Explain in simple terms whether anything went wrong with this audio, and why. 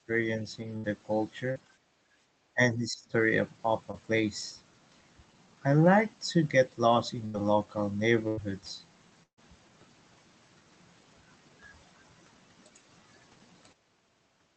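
Speech suppressed in double talk at 0.07 to 0.12 s and 2.54 to 3.16 s: the speech briefly turns quieter. The first dip is slight and very short. The second is a much deeper drop lasting about half a second. The likely cause is an echo canceller that heard both sides talking at once, couldn't tell this talker from the loudspeaker's echo, and turned everything down.

Burst of packet loss at 0.77 to 0.86 s, 7.26 to 7.36 s, 8.28 to 8.39 s and 9.23 to 9.39 s: chunks of the call arrived too late or not at all. The receiver stretched the last sound and let it fade, then jumped ahead. About 60, 80, 100 and 140 ms of audio are missing. The last gap ends in roughly 90 ms of silence.

Short concealed packet loss at 1.52 to 1.57 s and 3.91 to 3.95 s: smaller holes of about 40 and 20 ms. The receiver patched each one by continuing the previous sound and blending back in, so you hear only a quick smear or wobble rather than a clear gap.

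Background gated by the echo canceller at 1.70 to 2.26 s: while the loudspeaker was playing, the canceller clamped the microphone down hard. For about half a second the room sound sinks, then returns when the canceller lets go.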